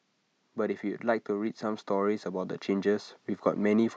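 From 0.41 s to 3.95 s, automatic gain rising lifts the level by about 7 dB. The gain control judged the input too quiet and turned itself up slowly. Voice and background swell together, so the room noise climbs along with the speech.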